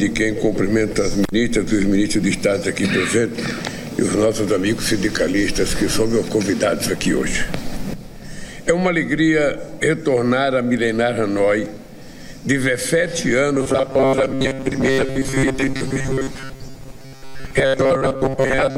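From 13.55 s to 18.77 s, robotic sound from repeated short buffers sets in. Most of the audio turns into a rigid, metallic buzz near 134 Hz, likely from a 7.5 ms buffer repeating.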